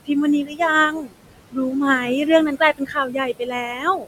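A speech recording with room noise sitting about 13 dB below the talker carries noise suppressor artifacts throughout. The suppressor pulls down the bands it judges to be steady noise by about 21 dB, frame by frame, so the background sinks in the gaps and swells back under the voice. In five places the suppressor also mistakes speech for noise and turns it down with the background: 0.43–0.6 s (about 15 dB), 0.9–1.13 s (about 18 dB), 1.52–1.74 s (about 15 dB), 2.77–3.17 s (about 21 dB), and 3.39–4.07 s (about 14 dB). In each span, quieter parts of the speech, such as soft consonants and word endings, lose level as the gain drops. They sound swallowed or faint. The affected portion runs from around a tenth of a second to about half a second. The deepest cut is the one near 3 s.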